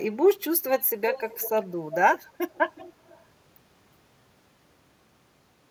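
From 1.13 to 1.68 s, and again from 2.51 to 3.26 s more faintly, an echo leak returns a discrete copy of the speech about 365 ms late, not a smooth reverberant tail. This is likely from a far-end loudspeaker whose echo canceller let some of the signal through.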